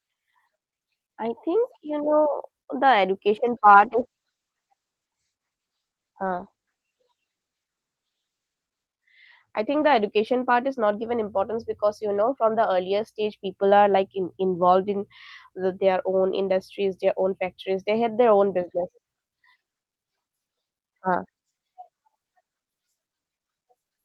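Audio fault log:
3.65–10.45 s, call bitrate drop: the speech loses its top end and turns coarse and watery as the audio band narrows from 20 kHz to 8 kHz. This fits the encoder being pushed from about 40 kbps down to 10 kbps after the call's bandwidth estimate fell. Starved of bits, Opus codes the spectrum crudely and discards everything above 8 kHz. The worst of it lasts about 5.2 s before the bitrate and brightness recover.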